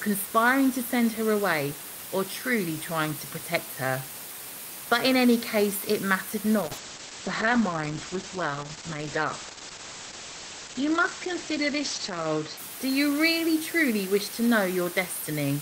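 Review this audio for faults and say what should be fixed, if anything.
A constant, even hiss runs under the speech for the whole clip, sitting only about 10 dB below it, with no grating distortion. This is low bit depth with dither: the audio is held at just a few bits, which fits 5-bit quantisation, and dither turns the rounding error into steady white noise. Keep the signal at 16 bits or more, and requantise only once, at final output.

From 6.62 s to 12.63 s, just after "any case it mattered", the speech turns rough, watery and muffled, with everything above 8 kHz gone. This is a call bitrate drop: the sound fits an encoder pushed from about 32 kbps down to around 9 kbps, coding coarsely for about 5.6 s before recovering. Give the call a stable connection with spare bandwidth, or set a minimum encoder bitrate.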